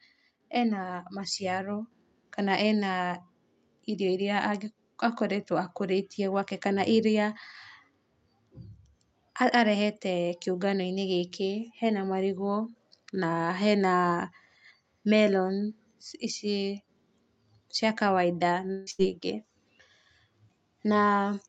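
From 0.83 to 5.55 s, automatic gain rising lifts the level by about 4 dB over several seconds. The background noise swells along with the speech, which separates it from a talker simply speaking louder, where only the voice would grow.

At 18.71 s, right after "cia kawaida", the sound turns into a fading, smeared continuation for about 153 ms before speech resumes at 18.90 s with roughly 160 ms of material skipped, most likely a long network dropout. No stretch of silence is heard, but the fill runs just past the length of an ordinary packet-loss gap.

Immediately after, from 18.91 to 19.02 s, a burst of packet loss replaces about 80 ms with a short concealed buzz or hiss. It is the same kind of concealment, but half as long, so it reads as a brief hiccup rather than a stall.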